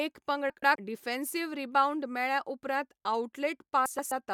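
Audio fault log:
0.50–0.76 s and 3.86–4.12 s, frames out of order. In each stretch, two adjacent 128 ms blocks of coded audio were decoded in swapped order. This fits runs of about four frames each. The later half plays first, then the earlier half. The sound stutters and jumps backward, with a garbled flutter. No time goes missing. The first stretch ends just before "डिफेन्सिव्ह रिबाउंड मेळ्ळ्या उपरांत".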